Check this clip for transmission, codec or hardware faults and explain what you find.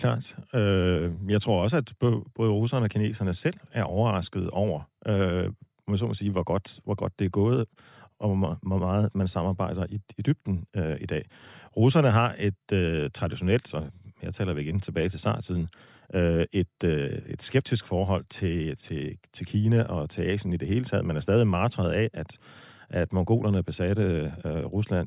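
Nothing stood out on listening to this recording of speech.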